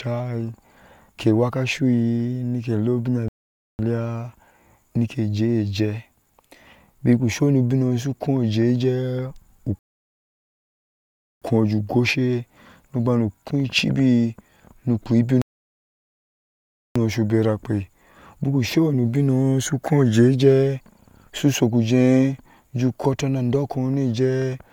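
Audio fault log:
3.28 to 16.96 s, rebuffering stall, three times: 3.28 to 3.79 s, 9.79 to 11.42 s and 15.42 to 16.96 s. The speech halts into silence for 0.51, 1.63 and 1.54 s. The player's buffer ran dry. Each time, playback resumes exactly where it stopped. Nothing is skipped, but time is added.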